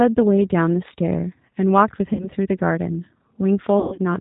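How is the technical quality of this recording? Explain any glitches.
The quality is limited. The whole clip is coded at a low bitrate, and two dropouts are patched over.

Throughout, the speech carries G.729 codec damage at 8 kbit/s. Each short frame is rebuilt from a filter, a pitch predictor and a few pulses. Nothing above 4 kHz survives. The voice sounds plainly rough and synthetic.

There are two patches of VoIP packet loss concealed by the speech codec. From 2.13 to 2.26 s, about 60 ms is missing. From 3.80 to 4.02 s, about 150 ms is lost in scattered gaps, the longest lasting 120 ms. The decoder extends its last pitch and filter while fading the level. The speech is stretched and weakens, and it recovers slowly.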